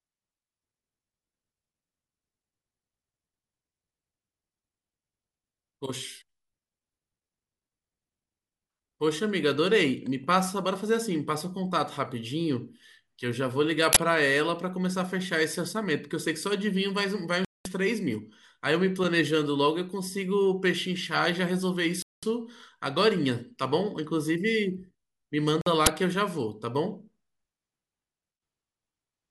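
At 13.93 to 13.97 s and again at 25.86 s, an uninitialised buffer plays stale memory as audio: a loud noise burst of 40 ms, then 10 ms, seen as a waveform spike and bright broadband spectrogram column. At 17.45 to 17.66 s, 22.02 to 22.23 s and 25.61 to 25.67 s, the speech drops to silence for about 205, 203 and 50 ms, likely a Bluetooth stall. Each gap appears as a flat waveform and a blank spectrogram band before the speech resumes.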